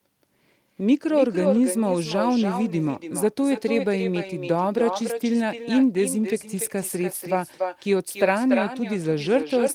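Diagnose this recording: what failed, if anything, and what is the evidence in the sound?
Call processing let echo through with no canceller: the far end's loudspeaker feeds its mic, so the speech returns about a third of a second later, only about 7 dB down.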